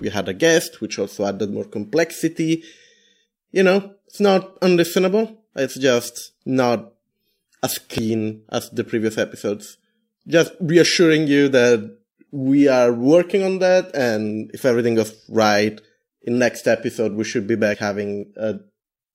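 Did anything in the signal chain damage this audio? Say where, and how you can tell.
Yes, at the codec stage. There is damaged data in the compressed stream, heard as two brief glitches in the speech, at 7.98 to 8.02 s and 17.74 to 17.78 s. The decoder hits corrupted bytes, misreads the frame, loses sync, and hunts for the next valid header.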